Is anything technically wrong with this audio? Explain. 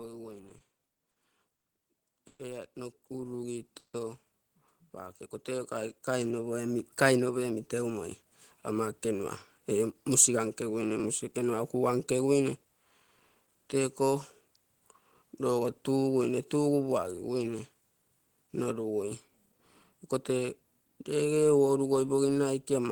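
Yes, the speech has several playback faults in its first 12 seconds.

From 0.49 to 1.65 s the audio stutters and drags through six brief stalls, the longest 80 ms. This is repeated stalls (stutter): late packets kept draining the jitter buffer, so about 200 ms of stretched sound fills the gaps.

From 2.1 to 8.19 s voice and background swell together by about 13 dB. This is automatic gain rising, with the gain control slowly raising a quiet input.

At 2.27 to 2.40 s and 3.78 to 3.94 s the sound hangs, fades, then briefly drops out for 20 ms and 80 ms. This is a call audio freeze, likely from packets held up in transit, adding gaps of about 120 ms and 150 ms.

From 3.20 to 3.60 s speech drags at 89% speed with unchanged pitch. This is a jitter buffer slow-down, where repeated pitch periods add 50 ms to rebuild the buffer reserve.

From 7.03 to 7.91 s speech sounds hurried at 110% speed, and again from 8.72 to 11.54 s at 106%. 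This is a jitter buffer speed-up, where trimmed pitch periods remove roughly 100 ms and then 200 ms of excess delay.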